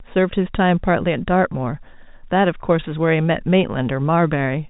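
At 1.53 s there is a brief buzzy hold: packet loss with pitch repetition, where the last pitch period is repeated to bridge a 10 ms gap, consistent with one lost packet.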